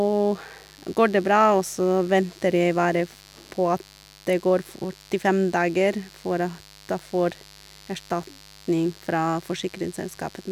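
Mains buzz runs through the whole clip, sitting roughly 25 dB under the speech. Sharp switching spikes, of the kind a dimmer, rectifier or unshielded lead lets into the signal path, arrive twice per cycle of the 50 Hz supply, so the interference carries a dense comb of 50 Hz harmonics stretching into the kilohertz range. Rather than a smooth hum, it comes across as a constant, gritty rasp beneath the speech.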